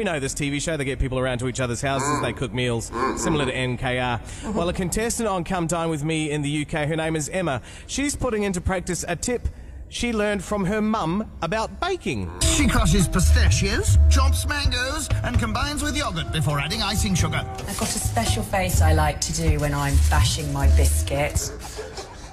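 No technical faults can be heard anywhere in it.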